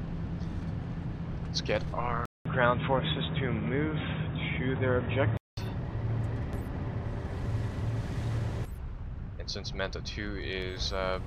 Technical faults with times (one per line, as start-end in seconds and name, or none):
2.25-5.57 input switched to a poorer device